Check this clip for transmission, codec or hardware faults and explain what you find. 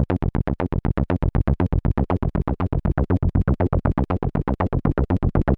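Nothing in this one trips any alarms. There's no break, glitch or hardware trouble to point to anywhere along the way.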